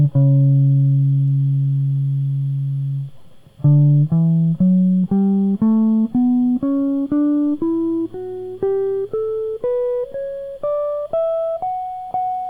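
No technical faults can be heard anywhere in this piece of music.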